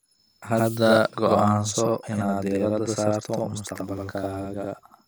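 From start to finish the speech has a channel delay doubling: one side arrives about 85.3 ms late, which fits a 4096-sample buffer, and once both are summed to mono you hear a second, equally loud copy trailing behind like a tight slap echo.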